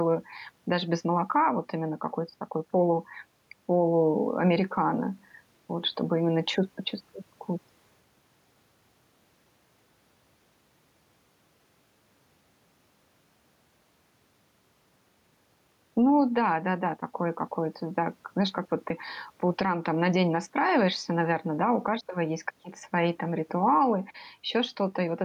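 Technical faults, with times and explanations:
Throughout, gain pumping: input gain is likely far too high, so fast limiting clamps loud sounds; the gain swings about 5 dB.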